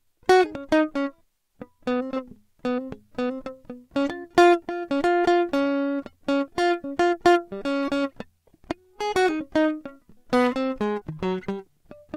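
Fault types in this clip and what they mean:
Short concealed packet loss: twice, near 4.21 s and 11.0 s, about 20 ms of the music arrived too late and was filled by extending the preceding sound. Each is a brief smear or wobble, a short smoothed patch on a spectrogram and repeated-looking cycles on the waveform.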